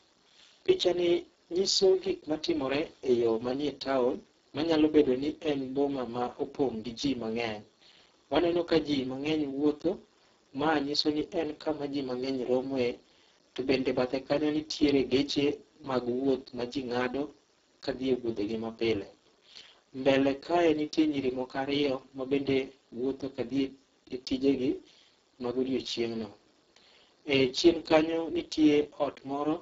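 From start to finish the speech carries heavy Speex codec damage, noisy and hoarse, pointing to a very low bitrate, with nothing above 7.7 kHz.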